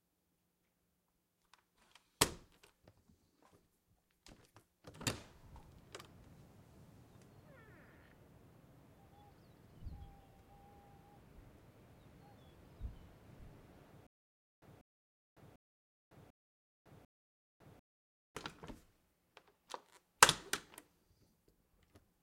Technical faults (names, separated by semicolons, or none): stutter with silent gaps